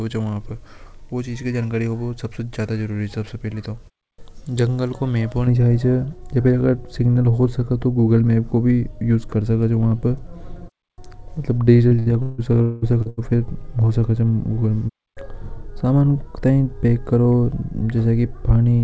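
From 5.47 s to the end, de-emphasis applied wrongly cuts the treble: a high-frequency roll-off meant to reverse pre-emphasis that wasn't there leaves 10 kHz about 11 dB below 1 kHz. The speech turns dull and muffled, on top of the call path's band limit near 8 kHz.

Between 11.88 and 13.20 s, repeated packet loss breaks the speech into a choppy, robotic stretch. Several holes, the longest about 0.2 s, are patched by extending the preceding sound, so more than 40 percent of that span is concealed filler.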